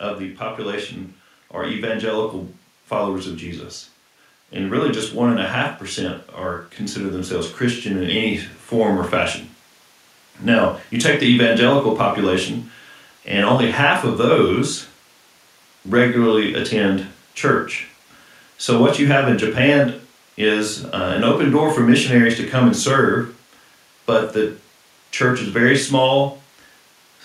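From 6.94 to 9.09 s, automatic gain rising lifts the level by about 4 dB; voice and background swell together gradually, unlike a fader move or a sudden step.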